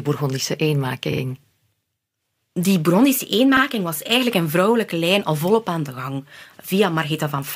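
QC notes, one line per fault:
1.12–1.21 s, repeated frames: a 46.4 ms block of compressed audio is played twice more, which fits a run of two frames being resent. This adds about 93 ms and is heard as a quick stutter. A spectrogram shows the same slice copied side by side. The waveform shows an identical segment repeating.
3.56–3.61 s, repeated frames: a 42.1 ms block, consistent with four short frames, plays one extra time and adds about 52 ms. The result is a single hiccup. It appears as a duplicated spectral slice.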